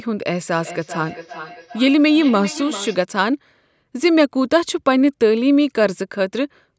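Feedback echo between two devices, 0.56 to 3.03 s: another device's playback re-enters the microphone, so speech repeats roughly every 0.4 s, about 16 dB down.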